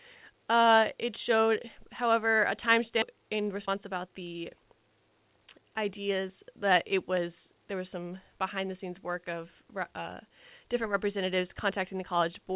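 At 3.02 s, right after "however a", the speech makes a skip ahead. Roughly a second of audio was thrown away while later audio was already queued, and playback jumps straight to it with no silence or concealment filling the join. Unlike a dropout, there is no gap or muted stretch. The sentence simply lurches forward, and the words on either side are spliced together almost directly, so content is lost rather than paused.

From 3.12 to 4.91 s comes a jitter buffer speed-up. After the jump, the receiver was still holding more audio than its target, so it trimmed short pieces of one or a few pitch periods again and again, removing around a fifth of a second in total. The speech runs about 11% fast and sounds hurried. Unlike resampling or a tape-speed change, the pitch stays the same, and only the pacing tightens. All of this passes through the G.711 A-law call path at 64 kbps, which leaves nothing above 4 kHz.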